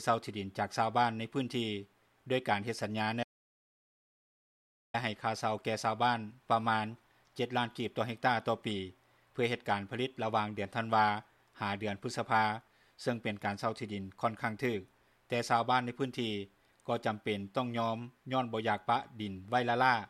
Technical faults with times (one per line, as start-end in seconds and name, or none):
3.23-4.94 audio dropout to silence